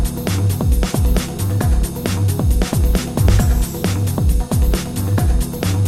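No faults are present in the clip.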